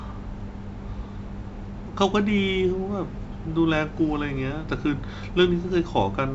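Nothing faulty is audible anywhere in this speech.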